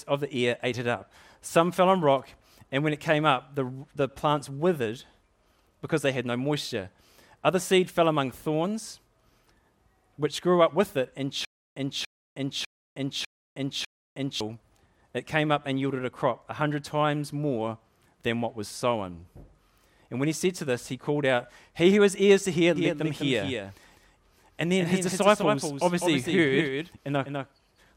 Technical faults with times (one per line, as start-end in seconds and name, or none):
11.45-14.40 stutter with silent gaps
22.76-27.96 doubled audio track